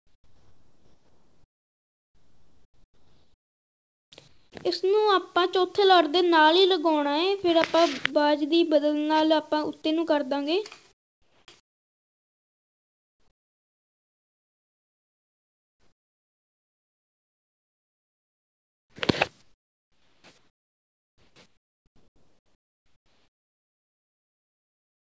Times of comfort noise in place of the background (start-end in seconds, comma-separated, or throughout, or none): 0.00-4.52, 10.92-18.96, 19.42-25.04